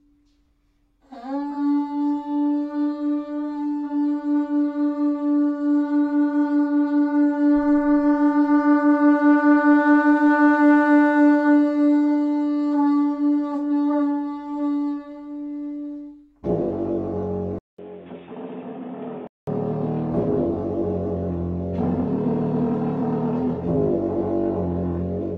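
At 17.58 s the input likely switched to a poorer device, with the recording path handing over to a different, narrower-band capture source until 19.47 s. A silence of about 200 ms marks the changeover. Then the sound turns dull and boxy, with nothing above 3.8 kHz, drops by roughly ten decibels, and carries a new background noise sitting well below the signal. At 19.47 s the fuller sound returns.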